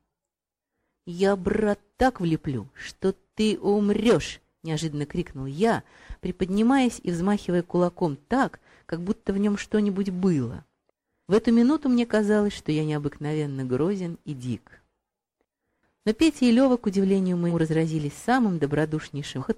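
The audio jumps forward twice, at 17.49 s and 19.39 s, where compressed frames were skipped. The spacing fits frames of about 46 ms, with a few frames lost first and several more later. A spectrogram shows a brief vertical mark where the texture abruptly changes.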